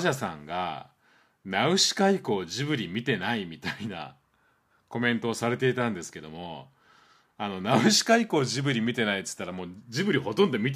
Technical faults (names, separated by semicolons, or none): none